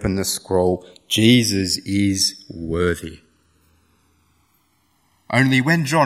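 Across the whole speech recording, the two channels are drifting apart: the left and right sides appear to have been captured on separately clocked devices that differ by something like 150 ppm, so the offset between them grows steadily to around a millisecond by the end. Folded to mono, the resulting comb notches glide slowly through the spectrum, giving a gradual flanging sweep. A fixed inter-channel delay would instead sound statically hollow, with the notches never moving.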